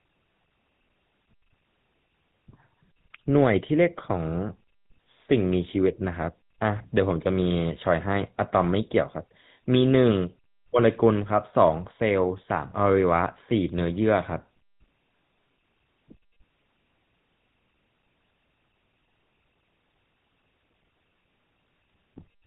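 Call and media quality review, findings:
GSM full-rate codec across the whole speech clip. Vocal-tract model driven by a regular pulse train, excitation thinned to every third sample, rate fits 13 kbps. Plainly audible buzzy, gravelly roughness; nothing above 4 kHz.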